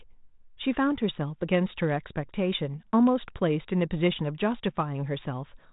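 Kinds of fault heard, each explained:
No fault can be heard in this speech. The 32 kbit/s G.726 ADPCM path leaves the familiar telephone band, with nothing above 3.8 kHz and only a light trace of its coding.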